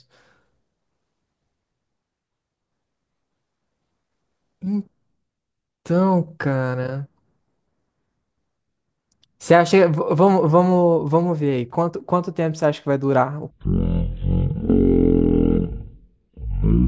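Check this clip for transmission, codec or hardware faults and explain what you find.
There's one clear fault, right at the tail end of the speech. From 13.5 s to the end at 16.9 s there's a wrong sample rate problem. The samples are being played back far slower than they were captured, with no conversion, so speed and pitch drop together. It runs at a third of normal speed and about 19 semitones low, which fits 48 kHz material played out at 16 kHz. The speech turns into a slow, deep, dragging voice.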